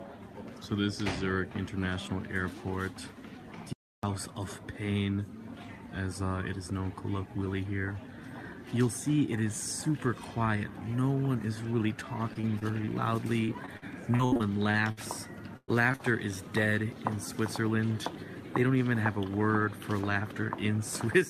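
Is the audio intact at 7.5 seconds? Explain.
Yes, at 7.5 seconds the audio is intact, with no dropout, click, distortion or other fault at that point.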